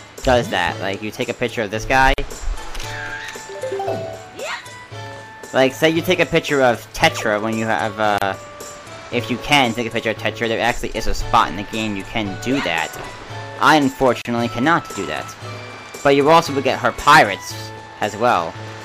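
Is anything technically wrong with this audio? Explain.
Yes. There is a gap at a join of encoded pieces at 2.14, 8.18 and 14.22 s, about every 6 s. Separately encoded pieces were joined untrimmed. This leaves gaps of 45, 34 and 34 ms with smeared edges before the sound resumes.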